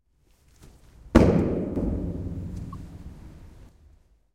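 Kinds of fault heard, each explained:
Sudden gain jump: At 1.76 s the whole sound, background included, leaps up by about 7 dB with no fade, then drops back just as abruptly at 3.69 s. This is likely a digital gain change applied between one sample and the next without a ramp.
Damaged data in a compressed stream: A short blip lasting about 44 ms breaks the sound between 2.71 and 2.75 s. Corrupted bytes in the compressed data made the decoder misread those frames, lose sync and hunt for the next valid frame header.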